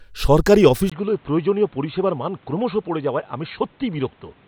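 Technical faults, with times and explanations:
0.90 s to the end, input switched to a poorer device: after a 20 ms gap, sound turns dull and quieter, with nothing above 4.3 kHz and new background hiss. A device change is likely.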